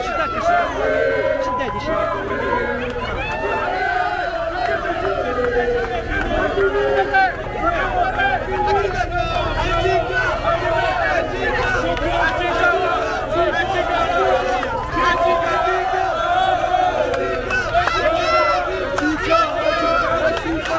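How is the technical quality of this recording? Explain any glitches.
The recording has three very brief dropouts. At 2.28–2.30 s, 7.44–7.46 s and 14.90–14.92 s, the sound is replaced by steady noise or near silence for 20 ms each time. The likely cause is sound dropped by the voice detector. It judged the audio to be background and stopped sending, so the receiver filled the gaps with comfort noise. Across the call path, nothing is heard above 8 kHz.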